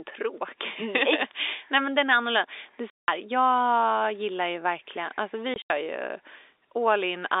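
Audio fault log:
2.90–3.08 s and 5.54–5.70 s, packet loss filled with silence: a solid 180 ms hole, then 100 ms of gaps scattered over 160 ms just after "gillar ju verkligen alltså", longest 80 ms. The hard-edged dropouts, in steps fitting 20 ms packets, are true silence rather than smeared or repeated concealment.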